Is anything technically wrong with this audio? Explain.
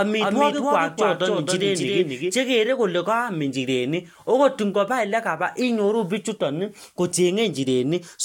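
Yes. From the start to 2.44 s, a doubled audio track trails the speech by about a third of a second, some 5 dB quieter, likely from a second, slower capture path. Unlike an echo, it has no decay or room colour and cuts off abruptly.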